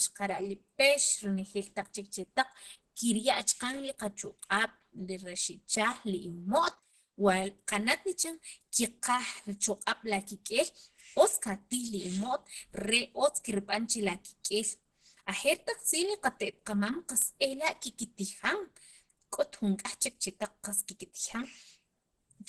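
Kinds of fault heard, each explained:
Channel delay (comb filtering): One channel runs about 5 ms behind the other, and summing them to mono cancels frequencies at regular steps, the first notch sitting around 100 Hz. The speech comes out hollow and phasey throughout, with that fixed notched colouring never moving.
Opus compression: The speech sounds rough, grainy and a bit hoarse and muffled all the way through, with nothing above 12.1 kHz. It's likely heavy Opus coding in its hybrid mode, which fits a low rate of around 12 kbps, smearing texture into noise.
Clock slip clicks: From 0.25 s to 22.39 s there's a faint, steady tick roughly every 0.15 s, around 150 in all. Each one is a single sample dropped or repeated, likely from two unsynced clocks drifting apart by something like 150 ppm.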